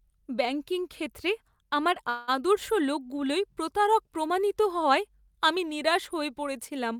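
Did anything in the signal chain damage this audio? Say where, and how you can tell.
Yes: a call audio freeze at 2.09–2.30 s, likely from network packet delay. The speech pauses while a fading buzz fills about 184 ms, appearing as a smeared, decaying band, then resumes intact.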